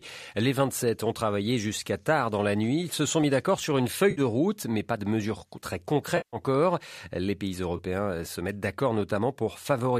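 Lost AAC frames forced the decoder to conceal from its last good spectrum, producing AAC frame loss with concealment at 4.11–4.21 s after "mis d'accord sur une", at 6.17–6.37 s after "pas de mesures très", and at 7.77–7.80 s before "euh se mettent d'accord", each heard as a brief smeared, noisy patch.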